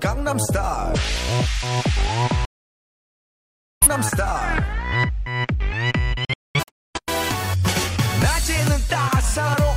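From 2.45 to 3.87 s, a digital broadcast dropout mutes the sound as the receiver loses good frames. It recurs as scattered short holes from 6.25 to 7.0 s. Each hole shows as a flat waveform gap and a blank spectrogram column.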